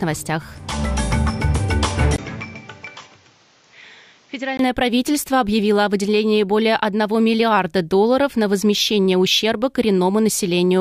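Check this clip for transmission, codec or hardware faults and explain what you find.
One hardware fault is audible. From 2.16 to 4.59 s, after a brief 20 ms gap, the sound turns duller and roughly 10 dB quieter, with nothing above 7.6 kHz and a new hiss well below it. This is likely an input switched to a poorer device. Unlike a codec bandwidth drop, the tone, level and noise floor all change together.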